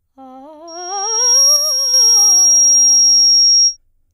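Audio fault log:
0.67 to 3.77 s, loudspeaker feedback squeal: a steady 5.6 kHz tone swells over about 0.7 s to roughly 15 dB above the music, from the microphone picking up its own loudspeaker.
1.56 to 1.94 s, one channel drops out: the music abruptly falls by about 6 dB and then recovers, likely because one stereo channel was lost before the mono sum.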